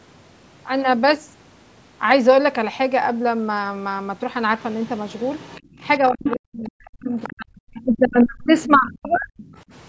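Other side's voice leaking through first appears from 4.81 to 5.87 s: a faint second voice, about 30 dB below the talker, sits underneath the speech. This is likely far-end audio from the device's loudspeaker that the echo canceller did not fully subtract from the microphone signal.

Background gated by the echo canceller occurs from 5.61 to 5.71 s, inside that first leak. The room sound drops by about 20 dB for roughly 100 ms, then comes back. While the loudspeaker was active, the canceller's suppressor clamped the microphone path down hard. The ambience briefly falls away and then reappears, which is heard as a short hole in the background.

Speech suppressed in double talk runs from 5.99 to 9.37 s, about 3 s in total. The talker's level sags repeatedly, at its worst by around 40 dB, and parts of the speech thin out or break into pieces. The likely cause is that both sides spoke at once, and the canceller could not separate its own talker from the loudspeaker echo, so it attenuated everything.

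The leak returns within that stretch at 6.24 to 6.68 s, its strongest point at about 10 dB below the talker. Shorter traces follow at 7.23 to 7.32 s and 7.76 to 7.81 s, both about 25 dB down. Another comes at 8.51 to 8.76 s, about 20 dB down, and a last one at 9.12 to 9.45 s, about 30 dB down. Throughout, the band stops at 8 kHz, which is the normal call microphone processing.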